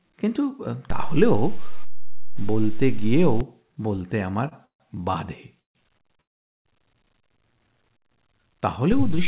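At 0.90 s the zero line of the waveform jumps, a DC step heard as a low thump while the speech carries on unchanged. The offset lasts until 3.41 s. A sudden shift like this comes from a converter recalibrating or an offset-carrying input being switched in; the signal content is unaffected, only its baseline moves.

From 4.49 to 4.53 s there is a short stall from a late packet. The jitter buffer ran dry, so the receiver held the last sound for about 25 ms until the packet turned up, then resumed from the same point. Nothing is lost; a sound is simply sustained a fraction too long.

Three longer call audio freezes follow, at 4.65 to 4.96 s, 5.59 to 5.77 s and 6.21 to 6.67 s. In each, the last sound is continued briefly as a fading buzz or hiss, then drops to silence for about 0.12 s, 0.15 s and 0.44 s respectively, before the speech picks up exactly where it stopped. The total hold-ups are roughly 0.14 s, 0.16 s and 0.44 s. 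The likely cause is packets delayed in transit emptying the jitter buffer, so time is inserted rather than audio removed.

At 8.92 s a second DC step shifts the baseline again with an audible thump, and the offset stays through to the end. Throughout, the band stops at 4 kHz, which fits the G.711 A-law call codec at 64 kbps carrying the audio.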